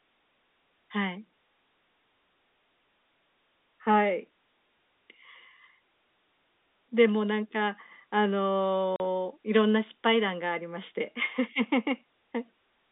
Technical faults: packet loss filled with silence

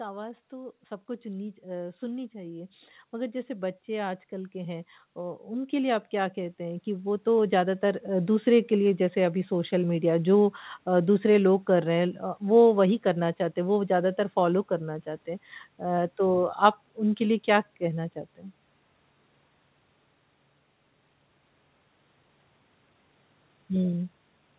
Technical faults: automatic gain rising

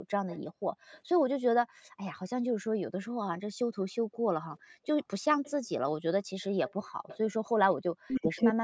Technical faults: background gated by the echo canceller; echo leak; speech suppressed in double talk

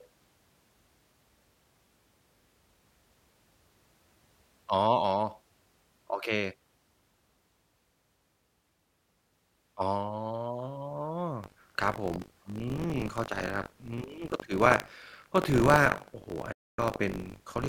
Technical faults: buffer tearing; digital broadcast dropout

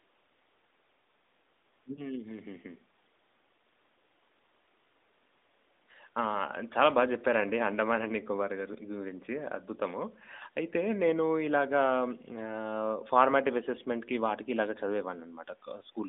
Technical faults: lost AMR speech frames

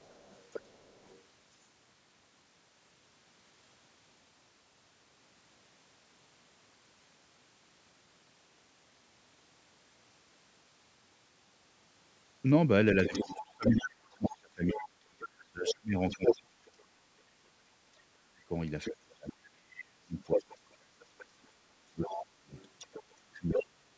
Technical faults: other side's voice leaking through; speech suppressed in double talk

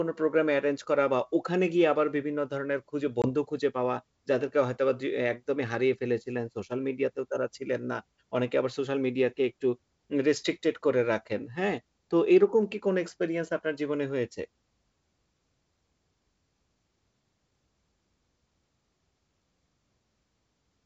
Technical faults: packet loss on an ADPCM call

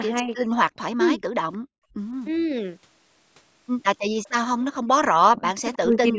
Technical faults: speech suppressed in double talk; background gated by the echo canceller; echo leak

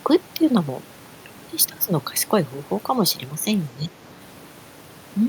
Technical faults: speech suppressed in double talk

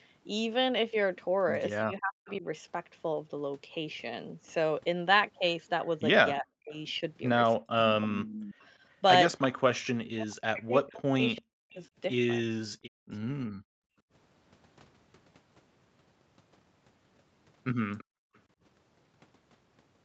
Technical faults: speech suppressed in double talk; echo leak; background gated by the echo canceller

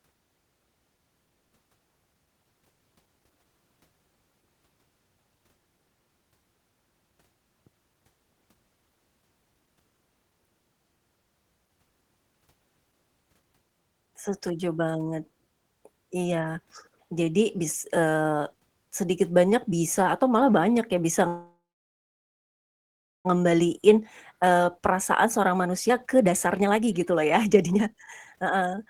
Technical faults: call audio freeze; jitter buffer speed-up

